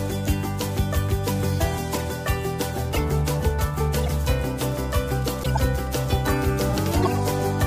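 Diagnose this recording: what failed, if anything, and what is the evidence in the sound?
Short chirps and squeaky noise bursts cut in at 1.93 to 1.99 s, 2.93 to 2.98 s, 4.04 to 4.08 s, 5.43 to 5.59 s and 7.03 to 7.18 s, the loudest near -10 dBFS. This is a codec-stage failure, a corrupt frame decoded: flipped bits in compressed frames were played rather than concealed, so misread gains and codes threw energy into the wrong frequencies. Each burst lasts a few frames, longest in the last two events.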